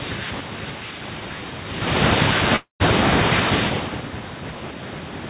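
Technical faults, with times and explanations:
2.56–2.83 s, long network dropout: the speech smears into a fading buzz, then falls to silence for about 130 ms before resuming with about 240 ms lost. Packets likely stopped arriving, so the receiver stretched the last sound until it had nothing left.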